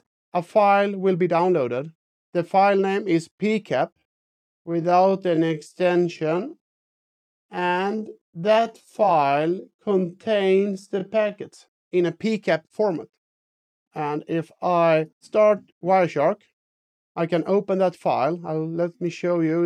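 A time-stretched section runs from 3.93 s to 11.35 s, where the pace abruptly drops to about 0.63 times normal speed while the pitch holds steady. The slowed stretch drags. The likely cause is software lengthening this portion to fill a set duration, repeating short fragments of the audio to keep pitch unchanged.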